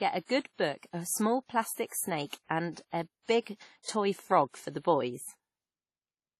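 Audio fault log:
Throughout: transcoding between lossy codecs. The speech has nothing above about 13.9 kHz, and the different codec artefacts are heard layered together. This likely comes from a low-rate encode, fitting WMA at 32 kbit/s, re-encoded as AAC-LC at 48 kbit/s, which spends bits on the earlier damage and adds its own.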